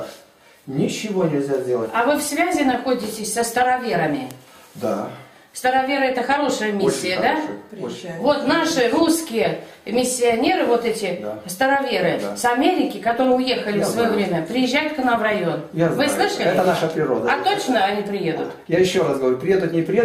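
At 4.31 s there's a bit error spike, a single sharp tick. One bit flipped somewhere in the digital path, so for what sounds like a single sample the value leaps by a power of two, peaking around -6 dBFS, then snaps straight back. Two quieter ones follow at 11.83 s, about -24 dBFS and seemingly two samples wide, and at 13.24 s, about -18 dBFS. Each is a broadband click with no connection to the surrounding sound.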